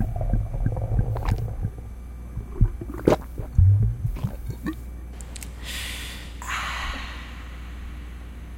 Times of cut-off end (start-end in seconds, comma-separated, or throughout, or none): none